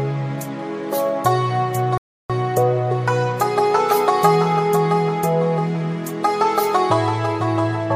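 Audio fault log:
1.98–2.30 s, rebuffering stall: the sound drops to silence for 0.32 s, then resumes exactly where it stopped, because playback ran dry awaiting data.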